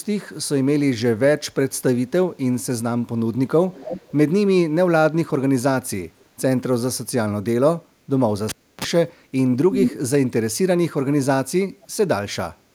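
From 3.73 to 4.13 s, and faintly from 6.19 to 6.25 s, a copy of the speech returns 304 ms late; this is likely echo leak from a loudspeaker talker's canceller.

Between 8.49 and 8.84 s a pop gives way to about 0.3 s of near silence, a 31 ms burst of 60 Hz mains buzz, then another pop: a cable pulled and plugged in.

The echo leak comes back at full speech level from 9.71 to 9.97 s, and faintly around 11.82 to 11.87 s.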